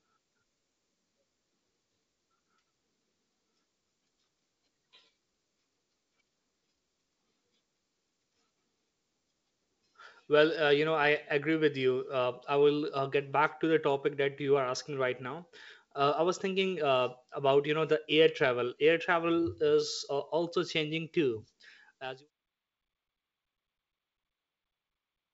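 No technical faults occur at any point in this audio, so there is nothing to place in time order.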